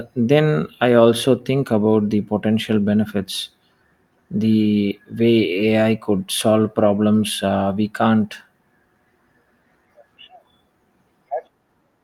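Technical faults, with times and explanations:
Listening through the speech recording, nothing technical stood out at any point.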